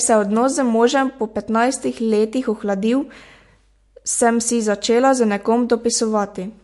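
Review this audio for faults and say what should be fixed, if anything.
Throughout the speech, the audio has a plainly audible watery, swirling texture with smeared s sounds and nothing above 11.3 kHz, likely MP3 compression at a bitrate near 50 kbps. Short of bits, the encoder discards the treble and drops weak bands. On a spectrogram this shows as a flat ceiling at 11.3 kHz with bands that flicker on and off from frame to frame. Encoding at a higher bitrate, or keeping a lossless master, would prevent it.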